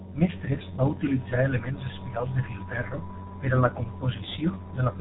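G.723.1 codec damage runs through the whole clip. The speech has been squeezed through a very low-rate telephony coder, and its sound points to roughly the 6.3 kbit/s mode. Nothing above 4 kHz survives, so the speech is muffled. The coder models the voice in 30 ms frames and updates that model sluggishly, leaving a heavy hoarse texture and smeared consonants whose sharp onsets blur into neighbouring sounds.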